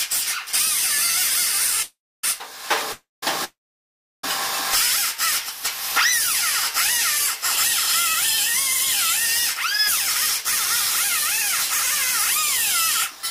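At 1.82 to 2.24 s, 2.92 to 3.23 s and 3.44 to 4.24 s, the sound stalls into a fading buzz, then silence, and resumes where it stopped with nothing lost. These are call audio freezes, likely from delayed packets emptying the jitter buffer, adding about 1.5 s of delay overall.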